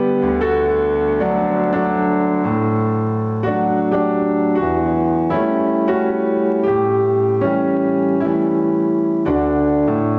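Throughout the audio there is a gain swing of about 15 dB that leaves the sound squashed and flat. This gain pumping is likely from input gain set far too high, with a fast limiter clamping each peak. The band-limited top end, with nothing above 8 kHz, fits a G.722 call path.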